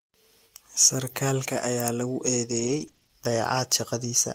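At 1.57 s there is a brief lost packet rebuilt from error correction. A single 20 ms stretch of the speech, which fits one lost packet, did not arrive. The next packet carried a low-bitrate backup copy, and the decoder played that instead. No gap is heard. The moment sounds rougher and noisier, because the copy holds less detail than the original.

From 2.51 to 3.11 s the speech turns choppy and robotic. This is repeated packet loss. Across this span there are six separate holes, the longest 20 ms. Each time, the decoder stretched the last sound to cover the gap, and then the next hole arrived soon after. About 120 ms was filled this way, roughly a fifth of the span. Another 120 ms is simply missing. Altogether, about a fifth of a second has been rebuilt. The result is a broken texture with small pieces dropped out.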